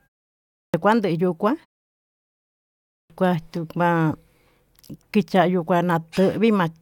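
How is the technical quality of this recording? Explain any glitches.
The recording has a clipped start after a pause, heard twice. At 0.62 s, after 0.62 s of silence, about 118 ms of sound is lost. At 2.97 s, after a 1.4 s pause, about 129 ms goes missing. The output device drops into a sleep state during silence. It needs time to wake and lock again. Meanwhile the opening of the next sound is swallowed. Each phrase jumps in abruptly, missing its first sounds.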